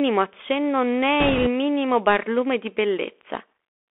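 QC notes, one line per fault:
throughout: Bluetooth CVSD headset codec. The audio is confined to roughly 300 Hz to 3.5 kHz, consistent with a 64 kbps one-bit delta modulator. Its adaptive step lags on loud, bright sounds, so sibilants turn scratchy and a granular hiss sits underneath.
1.20–1.47 s: bit errors on a Bluetooth voice link, ending just before "minimo barlume di". A rushing, crackly noise rides over the speech, which fits an error rate of around five percent. Each flipped bit moves the delta-modulated waveform by an amount that grows with the speech level and quickly dies away, producing grit rather than sharp clicks.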